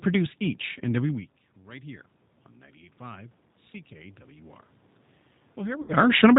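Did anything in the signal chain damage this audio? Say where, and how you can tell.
Yes. At the codec stage, the whole clip has passed through the G.729 codec (the G.729A variant at 8 kbit/s), and its damage is plainly audible. The speech sounds rough and synthetic because the decoder rebuilds it from a vocal tract filter, a pitch predictor and a few pulses per frame rather than the original waveform. The room noise behind it warbles. On a spectrogram, all energy stops at a hard ceiling of 4 kHz for the full length.

At the call-processing stage, automatic gain rising is audible from 2.97 to 4.61 s. The input level had fallen by about 20 dB. The gain control then swelled voice and room noise together by about 4 dB, winning back only part of the loss. On a waveform, the envelope grows steadily across that span, and the noise floor between syllables rises with it.

At the network stage, there is VoIP packet loss concealed by the speech codec from 5.82 to 5.94 s, just before the talker moves again near 6 s. 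About 60 ms of audio was lost, which fits two lost packets. The decoder extrapolated from its last pitch and filter state, lowering gain frame by frame. The result is stretched into a buzzy tone or a coloured noise that fades. On a spectrogram, this shows as flat, smeared harmonics or a uniform noise band that decays, followed by weak, distorted frames as the decoder state rebuilds.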